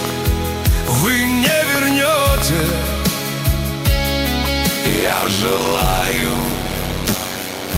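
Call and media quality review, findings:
Train of clicks, 0.05 to 2.70 s: around ten ticks at roughly 4.2 per second, irregular spacing, peaking about 10 dB above program, audible in pauses too. Likely external interference or a faulty connection or power supply injecting repeated similar pulses.

Block size mismatch (padded), 4.88 s to end: buzz at 93.8 Hz, playback slowed to 0.625x at about normal pitch. Writer stage outputs short blocks into a reader expecting larger ones, zero-filling the remainder, consistent with a 512-sample read.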